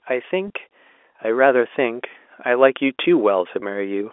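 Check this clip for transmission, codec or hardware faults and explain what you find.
Two kinds of fault turn up: two brief packet losses concealed by pitch repetition, and a slow automatic gain rise across most of the clip.

Packet loss with pitch repetition occurs twice, at 0.48 to 0.50 s and again at 3.60 to 3.62 s. Each gap is about 20 ms, which fits a single lost packet. The receiver bridged each gap by repeating the last pitch period, so both spots sound like a short, slightly held buzz. A waveform shows identical repeating cycles at each spot. A spectrogram shows harmonics frozen flat for that instant.

Automatic gain rising runs from 1.22 s to 4.08 s. The gain control judged the input too quiet and raised its level gradually, by about 6 dB in total. The voice and the background noise swell together, and the change is steady rather than sudden. On a waveform the envelope widens slowly across those seconds. 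A spectrogram shows the whole band, noise floor included, brightening evenly. The G.711 telephone coding underneath keeps the sound within the narrow line band.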